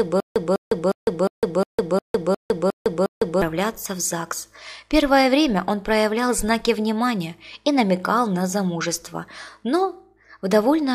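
From the start to 3.42 s, already under way, a stutter with silent gaps: the same 0.20 s burst repeats nine times, each followed by about 0.16 s of silence, every 0.36 s. This is likely a stalled player replaying its last fragment, with the intervening audio lost.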